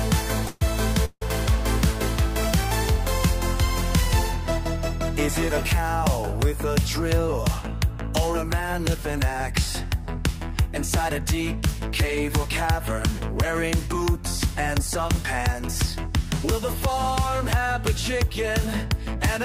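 At 0.47 to 0.62 s and again at 1.05 to 1.22 s there is a call audio freeze, likely from packets held up in transit so the jitter buffer ran dry. The receiver stretches the last sound into a fading buzz for about 137 ms and 163 ms, the second trailing into roughly 40 ms of silence. Nothing is lost; each stall adds its length to the delay before the sound resumes where it stopped.

Later, three stretches of jitter buffer speed-up follow as the receiver trims that built-up delay by cutting short pitch-period pieces: 8.64 to 10.68 s at 102% speed, removing roughly 50 ms; 12.45 to 14.80 s at 103%, about 70 ms; and 15.82 to 19.17 s at 103%, around a tenth of a second. Pitch holds steady, but the sound runs slightly faster through each section.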